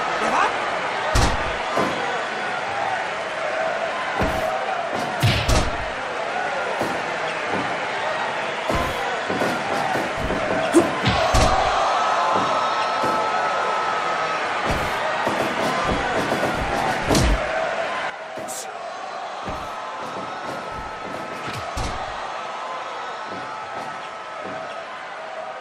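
At 18.1 s the level falls abruptly by about 9 dB and stays down to the end, a sudden gain jump. Background noise drops together with the sound in a single step with no ramp, unlike a fade or AGC pumping, likely from a gain setting applied instantly.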